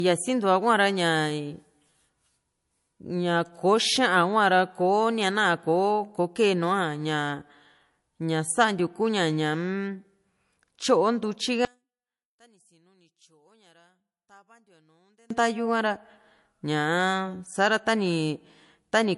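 From the start, the speech sounds dull and smeared, with swirly, watery artefacts and nothing at all above 11.3 kHz. The top end is simply missing, not just quiet. This is low-bitrate audio saved at a high bitrate. The audio was likely first squeezed through an MP3 encoder at a low rate, which fits roughly 48 kbit/s, and then re-encoded as MP3 at around 290 kbit/s. The second pass cannot restore the detail or bandwidth the first one threw away.

From 11.65 s to 15.30 s, when played in mono the speech collapses to a faint ghost, about 36 dB quieter than the surrounding audio. This points to one channel inverted. One stereo channel has likely had its polarity flipped for this stretch, so the centred material, identical in both channels, cancels when they are summed. Only the small difference between the two channels survives, and the full level returns once the stretch ends.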